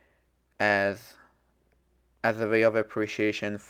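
A speech clip with timing edits from 0.08 to 3.24 s, where repeated timing corrections insert short repeated pieces, adding roughly 70 ms and playing at about 98% speed. Underneath is clock drift between sender and receiver: the sender's clock runs roughly 1.5% slow, so the receiver's buffer keeps draining and must be refilled.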